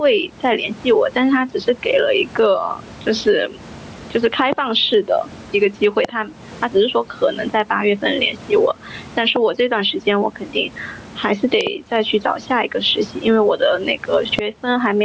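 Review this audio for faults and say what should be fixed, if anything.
Gain pumping runs throughout the speech, with the gain swinging by around 15 dB. The likely cause is input gain set far too high, with a fast limiter clamping each peak. Lowering the microphone gain so the limiter rarely engages would prevent it.

Loud pops, roughly 20 dB above the speech, occur at 4.53, 6.05, 9.36 and 14.39 s, and as a double pop from 11.61 to 11.69 s. Each shows as a sharp vertical spike on the waveform and a full-height vertical stripe on the spectrogram. The likely cause is a connector, switch or static discharge. Securing cables and grounding the setup would prevent them.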